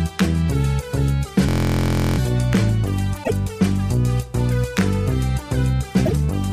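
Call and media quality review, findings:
System hang loop, 1.49–2.18 s: steady buzz at 43.1 Hz, one 23.22 ms fragment repeated 30 times, which fits a 1024-sample ring buffer replayed while the host or driver stalled. Roughly 0.7 s of audio lost.

Damaged data in a compressed stream, 3.20–3.31 s and 6.02–6.13 s: brief chirp/blip each time. Corrupted or missing bytes in the encoded stream; the decoder misreads frames, loses sync and hunts for the next valid frame header.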